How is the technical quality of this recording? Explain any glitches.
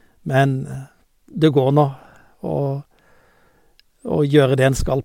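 The technical quality of the recording is good, and there are no glitches to explain.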